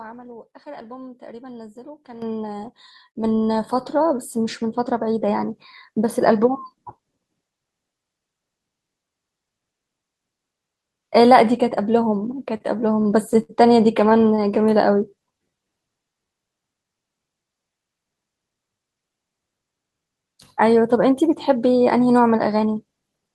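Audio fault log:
2.22 s and 3.24 s, microphone volume stepped up: the call software judged the microphone too quiet and raised its input volume in two single steps, about 10 dB and then about 5 dB, so the speech and the background noise jump louder together at each moment.
12.57–12.62 s, short stall from a late packet: a packet arrived late and the jitter buffer ran dry, so the receiver stretched the last sound for 28 ms before resuming from the same point. Nothing is lost, but one sound is held unnaturally long.
13.02–13.51 s and 14.05–14.40 s, repeated stalls (stutter): packets kept arriving late, emptying the buffer repeatedly. In the first span, four holds covered 108 ms, the longest 67 ms, about 22% of the span. In the second, five brief holds covered 46 ms. The speech drags and stutters with nothing missing.
14.58–16.15 s, jitter buffer slow-down: to rebuild its reserve, the receiver repeated single pitch periods and pause fragments, adding 168 ms and running the speech at about 90% speed. 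Pitch stays the same, so sounds come out drawn-out.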